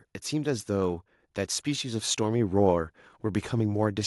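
From 1.64 s to 4.02 s, automatic gain rising lifts the level by about 5 dB: the gain control judged the speech too quiet and ramped up slowly. Unlike a talker simply speaking louder, the background noise swells in step with the voice.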